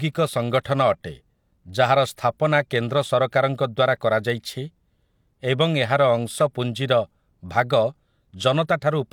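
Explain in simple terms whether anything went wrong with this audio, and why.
Nothing went wrong here; it's just speech, and there's no problem to point to anywhere in it.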